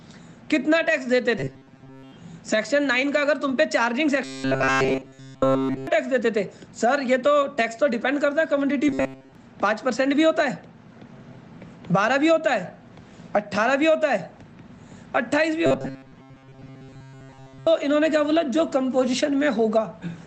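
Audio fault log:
1.39 to 2.13 s, 4.25 to 5.87 s, 8.89 to 9.35 s and 15.66 to 17.67 s: robotic sound from repeated short buffers. A rigid metallic buzz at 133 Hz replaces the sound's natural movement, most strongly at 4.25 to 5.87 s, where almost nothing else remains. The likely cause is audio arriving late, with a segment of about 7.5 ms looped to fill the gap. Each loop sets the buzz pitch, over a call path audibly limited to about 8 kHz.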